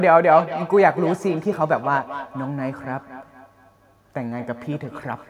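From 0.3 s to the end runs feedback echo between two devices: a second device replays the speech, and the first device's microphone recaptures it where no echo canceller can reach. Thin, ringing repeats return every fifth of a second or so, up to about 13 dB below the speech, unlike reverberation's smooth, gapless tail.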